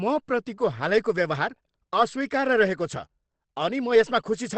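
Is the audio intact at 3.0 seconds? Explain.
No. At 3.0 s the speech sounds muffled and hoarse, and that holds for the whole clip. Nothing comes through above about 8.4 kHz. That's likely Opus compression dropping into its SILK speech mode, which fits a bitrate around 16 kbps.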